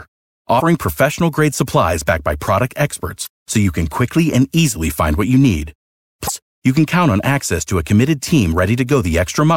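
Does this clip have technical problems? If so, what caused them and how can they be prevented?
Yes. Damaged data in a compressed stream causes brief glitches at 0.57–0.61 s, 3.23–3.27 s and 6.25–6.29 s, where the decoder misreads corrupted frames and resyncs. Checksummed storage and error-protected transfer prevent this.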